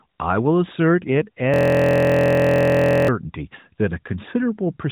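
From 1.54 to 3.08 s, a system hang loop repeats one identical 23.22 ms slice, producing a steady 43.1 Hz buzz rather than a stutter.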